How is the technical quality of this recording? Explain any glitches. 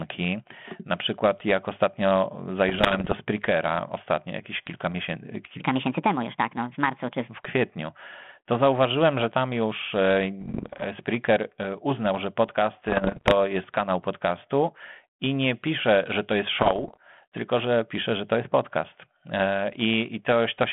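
The recording is a narrowband telephone-quality speech clip, band-limited to about 150 Hz to 3.4 kHz by light G.726 ADPCM coding, with two kinds of glitch.

Bit errors on an ADPCM link occur from 2.69 to 3.13 s, 10.40 to 10.85 s, 12.86 to 13.33 s and 16.58 to 16.97 s. Each flipped bit throws off the decoder's step size and prediction, producing pops and rough, crackly bursts. The waveform shows jagged spikes, and the spectrogram shows broadband vertical streaks.

A section at the wrong speed runs from 5.6 to 7.28 s, played 1.41 times too fast and likely clocked incorrectly. The speech becomes hurried and about seven semitones higher, and the spectrogram's harmonics jump upward and spread apart.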